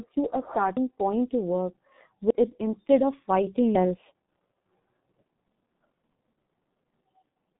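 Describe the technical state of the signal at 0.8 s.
At 0.77 s there is a dropped buffer (overrun). The audio jumps forward at that instant, and about a tenth of a second of sound is simply missing. There is no gap of silence. The two sides of the missing piece are butted together, so the sound lurches ahead mid-flow. The likely cause is that the software failed to collect its samples in time, and the hardware overwrote them before they were read.

The same moment also carries the G.723.1 codec that runs through the whole speech clip. At 6.3 kbit/s it works in coarse 30 ms frames and models the voice only slowly. The line passes roughly 150 Hz to 3.6 kHz, so nothing higher survives. The damage is heavy. Speech sounds muffled and hoarse, and consonants are smeared.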